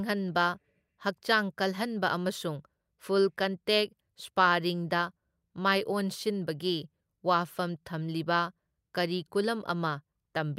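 Nothing in this speech recording stands out as a technical fault; there's nothing here to flag.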